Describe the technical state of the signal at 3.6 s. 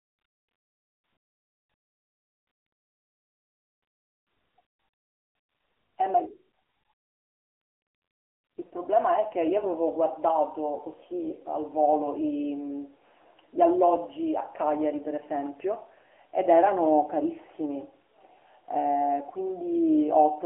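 At 3.6 s, as throughout, the AMR narrowband mobile codec is audible: the speech is band-limited to a telephone line, with nothing above 3.8 kHz. The low bitrate of the vocal-tract model gives it a buzzy, synthetic edge, and the rate points to about 8 kbps. A spectrogram would show an empty band above that ceiling.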